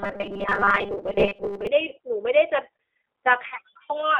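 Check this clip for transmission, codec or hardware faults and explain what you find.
Three problems show up in this speech clip.

The whole clip runs through the G.729 codec at 8 kbit/s. It rebuilds the voice from a vocal-tract filter, a pitch predictor and a few pulses per frame, with nothing outside roughly 300 Hz to 3.5 kHz. The damage is plainly audible: a thin, slightly rough, synthetic quality throughout.

From 0.01 to 1.67 s there's robotic sound from repeated short buffers. Playback is likely starved, so tiny chunks get looped while fresh audio is dropped, roughly most of it in this stretch. That forces a rigid 200 Hz metallic buzz, which fits repeats about 5 ms long.

At 1.89 to 1.94 s there's VoIP packet loss concealed by the speech codec. About 20 ms went missing, consistent with one lost packet. The decoder bridges it by extrapolating its last pitch and filter at falling gain, so you hear a brief smear before things recover.

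The same concealment happens again at 3.48 to 3.56 s, this time covering about 40 ms, which suggests two consecutive packets. The stretched tone fades, and the voice stays a bit weak afterward while the decoder's state catches up.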